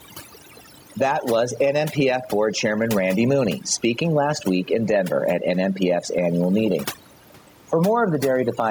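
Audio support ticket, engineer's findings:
Overdone noise removal, throughout. Background near silent apart from twinkling specks; quiet speech detail dropping out with the noise. Cause: noise suppressor set too aggressive, zeroing any band close to its noise estimate. Spectrogram: isolated flickering dots in the gaps, holes and ragged edges in the speech harmonics. Room noise, about 37 dB below speech, mostly scrubbed away.

Gain pumping, throughout. Gain swing of roughly 10 dB. Dynamics squashed, loud and soft speech close in level. Likely cause: input gain far too high, with a fast limiter or compressor clamping on peaks. Waveform: flat-topped speech envelope.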